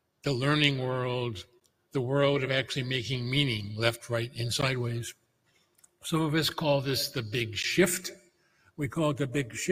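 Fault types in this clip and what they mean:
Noise suppressor applied to music or sounds: A speech-oriented suppressor treats sustained content as noise, so level swings by roughly 10 dB throughout, giving audible pumping and thinning.
Sound cut by the noise suppressor: Held and decaying material is pulled down hard, up to about 19 dB, at 0.01–0.26, 1.44–1.94, 5.14–6.04 and 8.17–8.79 s.
Gap between chunks: The audio arrives in 3.0-second chunks with a 13 ms silent hole at each join, heard as short holes at 1.60, 4.61 and 7.63 s.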